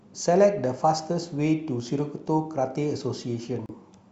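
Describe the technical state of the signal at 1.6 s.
At 1.6 s the speech signal is intact, with no dropout, clipping, glitch or other technical fault at that point.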